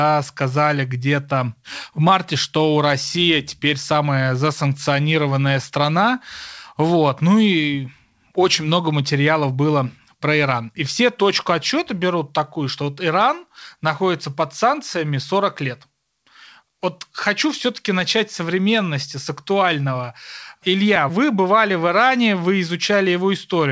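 No technical faults can be heard in this recording.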